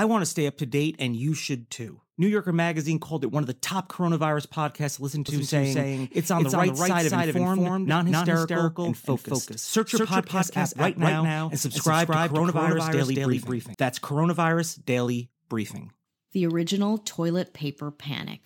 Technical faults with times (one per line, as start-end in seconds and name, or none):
5.28-13.74 doubled audio track